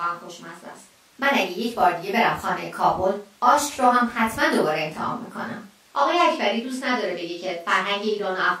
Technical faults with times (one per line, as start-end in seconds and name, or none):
none